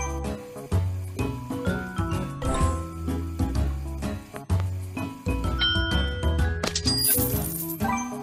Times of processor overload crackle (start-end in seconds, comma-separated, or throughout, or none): none